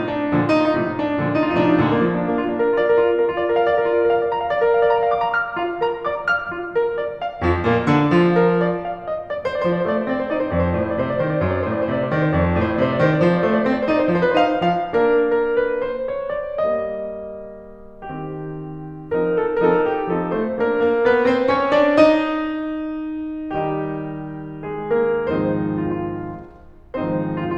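No technical faults occur at any point in this music.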